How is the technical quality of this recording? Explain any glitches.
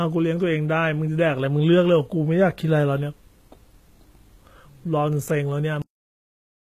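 The recording is compromised by heavy codec damage throughout and an abrupt ending.

Throughout, s sounds turn gritty and metallic, and nothing is present above 14.9 kHz. This is likely HE-AAC compression at a very low bitrate. Unlike plain low-pass filtering, the upper treble stays bright but is synthesised from lower bands, so its harmonics don't align with the real ones below.

At 5.82 s the speech has a cut-off end: the final buffers were never written, so the sound stops mid-utterance and drops to digital silence. Unlike a fade or natural pause, there is no decay or room tail at all.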